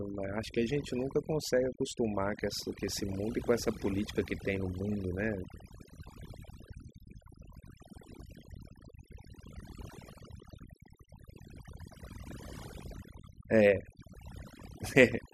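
Throughout the recording, overdone noise removal is at work: the noise reduction was driven far too hard, so each frequency band that comes close to its noise estimate gets pushed down steeply or shut off entirely. Low-level parts of the speech fall below that threshold and are cut along with the noise. The gaps between phrases collapse into near silence sprinkled with twinkling specks.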